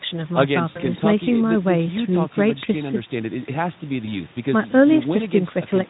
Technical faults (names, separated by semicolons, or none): VoIP packet loss concealed by the speech codec